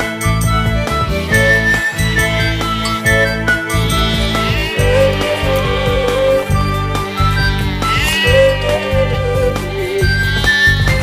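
Nothing in the audio stood out as a technical fault on listening.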